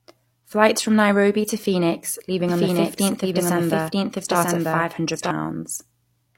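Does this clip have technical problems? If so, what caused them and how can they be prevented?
Yes. From 2.49 to 5.31 s there is a doubled audio track: a dry second copy, about as loud, trails roughly a second behind and starts and stops abruptly. This is likely caused by a slower second capture path or an edit holding two misaligned copies. To prevent it, route each source through only one capture path and check edits for overlapping duplicate regions.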